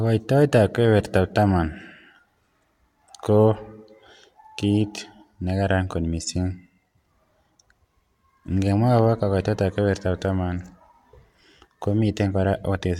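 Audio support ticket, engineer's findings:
No faults found on review.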